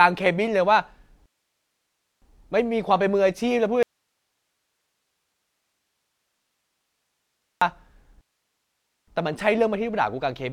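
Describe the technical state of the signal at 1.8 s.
At 1.8 s the speech is stopped by a rebuffering stall running from 1.26 to 2.22 s. The player exhausted its downloaded audio and waited for more. The result is silence lasting about 0.96 s. The speech then resumes exactly where it broke off, with nothing missing.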